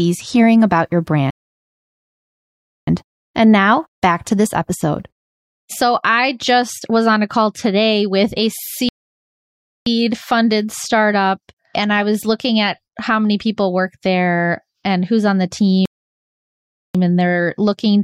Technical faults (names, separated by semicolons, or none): rebuffering stall